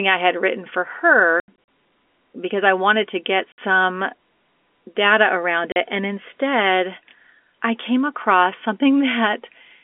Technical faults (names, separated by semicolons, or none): packet loss filled with silence